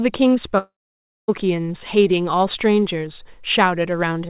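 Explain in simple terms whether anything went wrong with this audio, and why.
Something did go wrong, at 0.58 s. The speech suddenly turns into a short fading buzz, then goes quiet for roughly half a second, and picks up again at 1.30 s with a chunk simply gone, about 0.7 s in all. That's likely a long network dropout: the audio stopped arriving, so the receiver stretched out the last bit of sound until it faded to silence. The lost stretch never comes back, so the speech jumps ahead.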